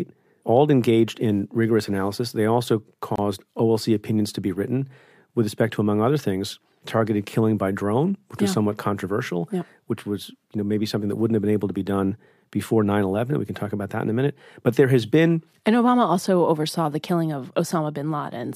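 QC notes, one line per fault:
3.16–3.18 s, gap at a join of encoded pieces: the speech breaks off for a gap of about 26 ms, then carries on exactly where it left off with nothing lost. Two separately encoded sections were butted together untrimmed, so one run's end-of-frame padding and the next run's start-up delay both sit in the join. Unlike a dropout or packet loss, no sound is skipped; the edges of the gap are smeared by the codec.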